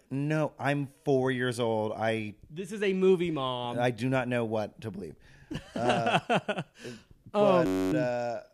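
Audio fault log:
7.66–7.93 s, system hang loop: the same 10.67 ms slice of speech repeats about 25 times back to back, which fits a 512-sample buffer being replayed while the system was frozen. Because the slice is so short, it fuses into a steady buzz at about 93.8 Hz rather than a stutter. Unlike mains hum or a tonal whine, the buzz carries the timbre of the looped speech, repeats exactly, and stops abruptly, with little or no audio missing afterwards.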